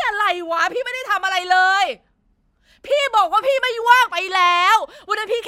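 Nothing stood out as a technical fault anywhere in the recording.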